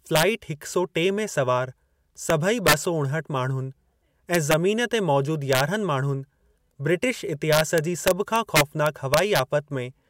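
Speech with integer overflow. Peaks driven about 2 to 4 dB past the integer limit wrap to the opposite sign instead of being limited, producing violent cracks sharper than clipping. These occur at 0.16–0.23 s (just before "हिक सौ"), 2.30 s, 2.67–2.74 s, 4.35–4.54 s, 5.53–5.60 s and 7.53–9.39 s.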